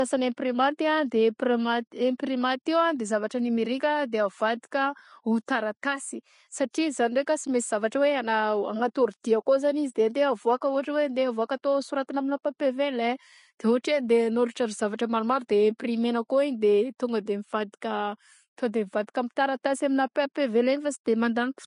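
Throughout the recording, the speech has nothing above 10.6 kHz. The top end is simply gone, so the air above the sibilants is missing. The fault is low-bitrate audio saved at a high bitrate. The sound was likely squeezed hard by an earlier codec and then encoded again generously. The hard cut-off fits a first pass near 32 kbit/s. The second encoding cannot bring back the lost detail.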